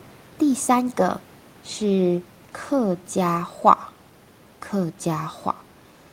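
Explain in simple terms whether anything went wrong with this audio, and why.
Nothing went wrong with this speech recording; the faint background noise is just the sound of the room the microphone was in, well below the talking.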